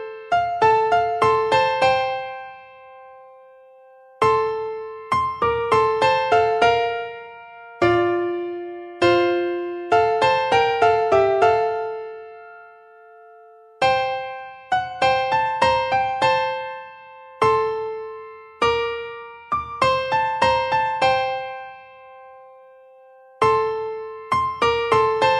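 Nothing goes wrong anywhere in the recording, so there's nothing to flag here.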